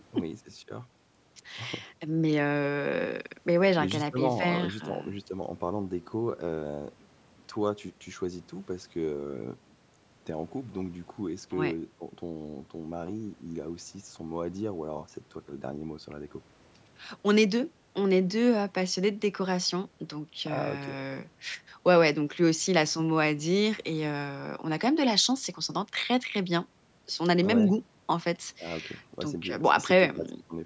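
No faults found in this speech clip; the call microphone processing behaves as designed, with the expected high-pass trim of the lowest bass and nothing above 8 kHz.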